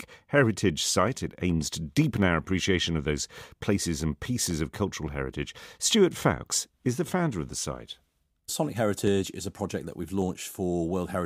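From 1.08 s to 10.22 s a click or pop recurs every 1.14 s, about ten in all, each sharp and brief against the signal. The steady spacing is the signature of clock drift buffer slips: two devices likely running on clocks a few hundred parts per million apart, so a buffer between them periodically drops or repeats a short block of about 15 samples. On a spectrogram each slip is a thin vertical broadband line at even intervals; in the waveform it is a tiny step or kink where the samples jump.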